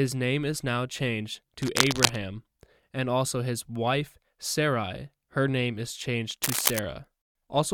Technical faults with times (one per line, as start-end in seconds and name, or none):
1.58-2.21 cable scratch noise
6.43-6.81 cable scratch noise